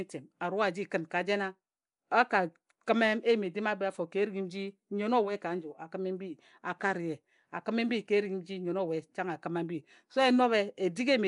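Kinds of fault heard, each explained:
Nellymoser compression: Rough, hissy smearing is plainly audible throughout the speech, with nothing above 10.6 kHz. It likely comes from coarse Nellymoser block coding near 44 kbps.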